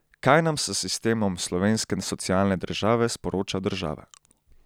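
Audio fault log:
No faults can be heard anywhere in the speech recording. Nothing in the signal path draws attention to itself at any point.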